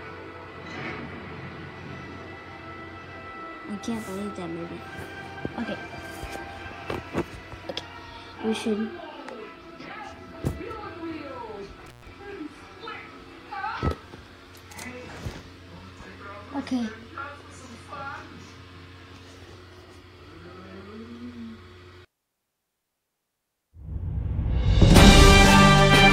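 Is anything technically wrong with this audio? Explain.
Yes, there is an intermittent contact fault from 11.86 to 12.07 s. A loose plug or cable connection briefly lost contact and broke the signal path for about 116 ms, so the sound drops out with crackle at the edges and faint hiss while the line is open. That crackling at the edges and the residual hiss set it apart from a digital dropout, which cuts to clean silence with abrupt, noise-free edges.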